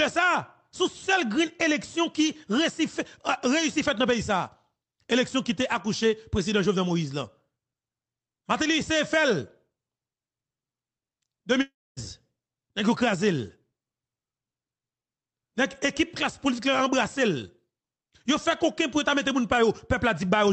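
From 11.61 to 11.99 s the sound breaks off into a fading buzz that decays into about 260 ms of silence, then resumes with roughly 360 ms lost. A long network dropout is the likely cause, the receiver stretching the last sound before giving up.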